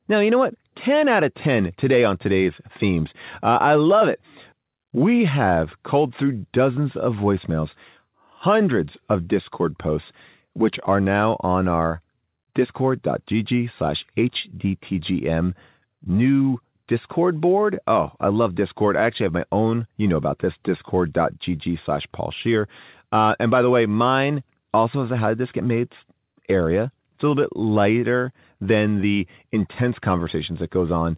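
Speech, with no technical faults to be heard.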